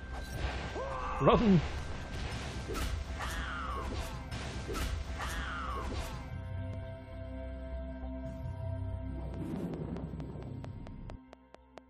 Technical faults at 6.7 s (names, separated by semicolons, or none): audio missing between chunks